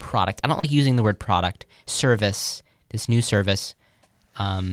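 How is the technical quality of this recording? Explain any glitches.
The recording has two kinds of packet-loss damage, both near the start and one again near the end.

Between 0.59 and 0.65 s, just after "I don't" and before "using the word product", there is short concealed packet loss. About 40 ms of audio never reached the decoder in time. The receiver covered 36 ms of that hole by extending the preceding sound, pitch-based or as shaped noise depending on what came before, and then crossfaded back into the real signal. The result is a brief smear or wobble, and a short sound inside the gap can disappear.

There are also two cases of a lost packet rebuilt from error correction. Each involves one 20 ms packet: one at 0.63 to 0.65 s, overlapping the end of that concealed stretch, and one at 3.03 to 3.05 s, right after "the word product service". In each case the original packet was lost, but the following packet carried a low-bitrate backup copy of it. 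The decoder played that copy, so there is no gap. Instead those 20 ms sound rougher and noisier than the audio around them.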